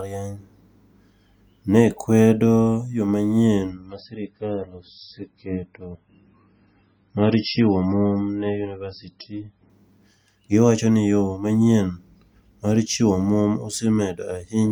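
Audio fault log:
3.70–9.70 s, adaptive stream at a lower bitrate: the speech abruptly loses everything above 5.6 kHz and takes on a thin, swirly coded texture, then snaps back with no gap, which fits the player switching from roughly 128 to 16 kbit/s MP3 while bandwidth dipped.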